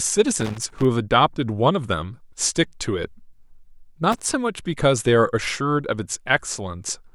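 Loose connector crackle at 0.40 to 0.85 s and again at 4.12 to 4.29 s: a worn or dirty contact in the speech path keeps breaking and remaking, chopping the signal into an irregular, scratchy burst.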